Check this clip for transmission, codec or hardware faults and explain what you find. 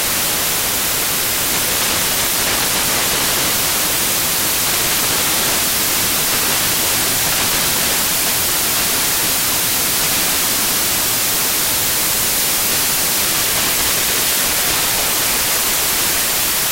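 The clip has one fault, present from start to finish: samples built from the wrong bytes. Each sample's bytes are assembled misaligned or in swapped order, so the rapidly changing low-order bits land in the high-order position. The result is loud, harsh broadband noise throughout, close to white on the loud passages.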